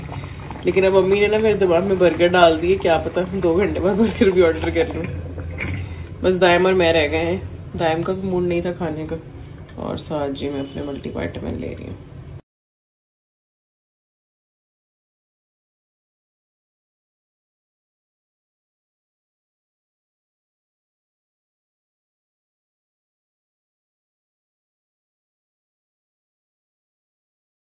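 No technical faults can be heard anywhere in this audio: the signal stays continuous and stable in level and timing throughout.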